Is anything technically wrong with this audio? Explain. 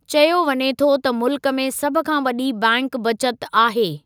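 No, nothing technically wrong can be heard anywhere in this speech recording.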